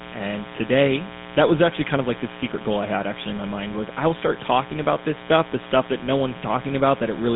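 From the first moment to the last, a mains buzz sits under the speech. Sharp switching spikes at 60 Hz leak into the signal, twice per cycle. Their harmonics climb well into the kilohertz range. The result is a steady, raspy buzz, roughly 15 dB below the speech.

Also present throughout is GSM full-rate codec damage. The speech has been squeezed into a phone band of about 200 Hz to 3.7 kHz, with nothing above 3.8 kHz. The coder rebuilds the voice from sparse, regular pulses, which fits a 13 kbps full-rate stream. This damage is plainly audible as a gravelly, buzzy roughness.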